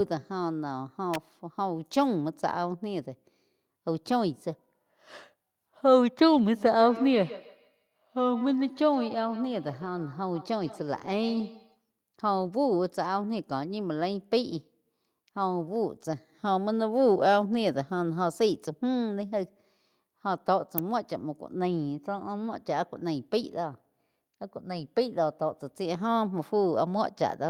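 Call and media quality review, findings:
Electrical switching spike at 1.14 s and 20.78 s. Sharp snap sitting on top of the speech, gone within milliseconds. Likely component: a nearby switch, relay or static discharge arcing, with the burst coupling into the audio line. This is an external pickup, not a codec event. Isolated transients only, with no repetition in between.

Lost packet rebuilt from error correction at 6.33–6.39 s, 9.81–9.87 s, 11.01–11.15 s, 12.37–12.47 s, 19.43–19.45 s and 22.15–22.21 s. No gaps. Short rough, noisy patches of 40, 40, 80, 60, 20 and 40 ms. The lengths point to two, two, four, three, one and two separate 20 ms frames lost. The decoder played the low-bitrate copies carried in the following packets.

Feedback echo between two devices from 6.54 to 11.81 s. Each phrase returns roughly every 150 ms, thinner and more ringing, peaking at about 15 dB below the speech. 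Probable component: a second device in the same room on the call, playing the first microphone's signal back into that microphone. The local echo canceller can't remove output it didn't produce.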